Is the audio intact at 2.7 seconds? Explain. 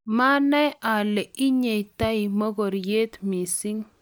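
Yes, at 2.7 seconds the speech plays through intact, with no dropout, click, distortion or other audible fault at that moment.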